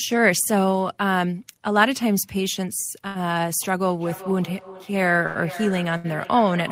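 At 3.07 s there's a short stall from a late packet. A packet didn't turn up in time, the jitter buffer ran dry, and the receiver held the last bit of sound for about 76 ms until the packet arrived, then carried on from the same point. Nothing drops out; you just hear the sound hang a touch too long with a faint buzzy smear. The same thing happens at 5.26 s for about 87 ms and at 5.97 s for about 71 ms, and each one pushes the delay out a little further.

From 4.0 s to the end there's feedback echo between two devices. Two devices in the same room are on the call, and one is playing back what the other's microphone picked up, so the sound goes round the loop again. Each device's echo canceller only deals with its own playback, so the copies get through. The repeats come roughly every 0.4 s, sounding thinner and more ringy each time, and peak at about 13 dB below the speech.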